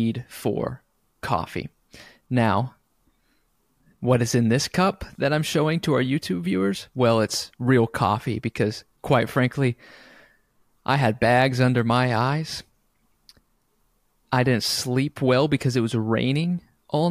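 Speech, with no technical fault to point to anywhere in the recording. Nothing in the signal calls for a time or a cause to be given.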